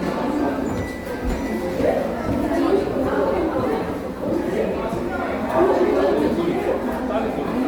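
From start to finish the sound is noisy, rough and grainy, with full bandwidth kept, which points to likely Opus compression in its music mode at around 24 kbps, filling starved bands with noise.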